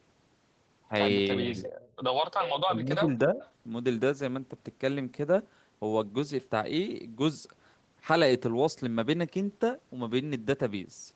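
From 1.37 to 1.56 s the speech dips by about 10 dB, and from 2.68 to 3.4 s it sinks by about 15 dB. This is speech suppressed in double talk, likely an echo canceller turning everything down while both sides talk at once. The level ducks and recovers rather than cutting to silence, which sets it apart from packet loss.

At 1.64 to 1.93 s, 2.31 to 2.61 s and 3.41 to 3.52 s, a fainter copy of the voice follows about 345 ms behind, roughly 15, 10 and 25 dB below the speech. This is echo leak, likely loudspeaker sound that the far end's canceller failed to remove. The steady, distinct delay marks it as a returned echo rather than room reverberation.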